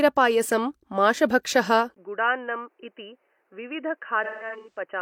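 At 1.94 s, after a 20 ms gap, the speech turns dull and boxy with nothing above 3 kHz, drops about 10 dB, and gains faint new noise. The likely cause is the input switching to a poorer device. From 4.24 to 4.80 s, AAC frame loss with concealment causes about 300 ms of smeared, phasey patches. The longest gap runs around 150 ms.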